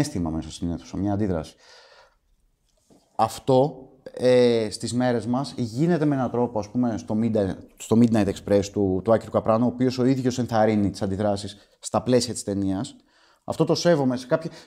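No technical faults can be heard anywhere in this speech recording.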